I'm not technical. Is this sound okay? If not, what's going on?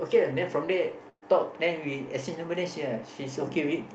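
No. At 1.09 to 1.24 s there's a burst of packet loss: about 120 ms of speech went missing, papered over with a fading held sound before the speech resumes.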